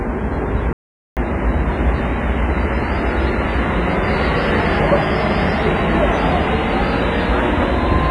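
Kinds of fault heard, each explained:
WMA compression: A low-bitrate transform encoder, likely WMA at around 24 kbps, zeroed weak spectral lines, leaving ringing, washy audio with breathing hiss.
playback stall: The player likely ran short of data or was blocked, so the sound cuts out mid-flow from 0.73 to 1.17 s, about 0.44 s of silence.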